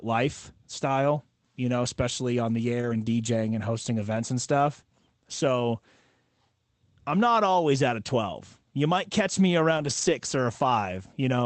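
Brief patches of rough, grainy, noisier speech with no actual dropout appear at 1.83–1.89 s, just after "lifestyle you know" and before "on the"; at 2.81–3.03 s, right after "on the"; around 4.15 s; at 9.77–10.07 s, following "might catch me"; and at 10.65–10.67 s. These are lost packets rebuilt from error correction. Packets went missing, but each following packet carried a low-bitrate Opus copy that the decoder played instead, so the gaps are filled with coarser audio. The rebuilt stretches last 40, 120, 20, 160 and 20 ms, which fits 20 ms frames.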